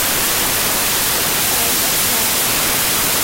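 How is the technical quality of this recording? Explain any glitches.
Poor: the recording is badly corrupted throughout. A wrong sample width runs the whole clip: 16-bit data read as packed 24-bit samples mixes bytes across samples, giving loud broadband noise over faint speech at 1.5 times speed and raised pitch. The waveform looks dense, and the spectrogram shows noise across all frequencies.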